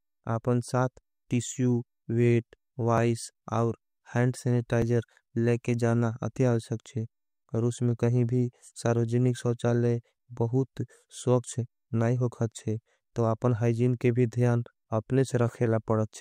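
Dropped buffers (overrun) at 2.98 s and 4.82 s interrupt this speech recording, each heard as a small jump in the sound. The first falls between "आपन साथ टिस्यू वेट" and "और हैंड", the second between "और हैंड" and "लेकर जाना अत्याल". Each skip loses only a few milliseconds with no gap of silence, likely because the software failed to read a capture buffer before the hardware overwrote it, leaving the audio on either side spliced together.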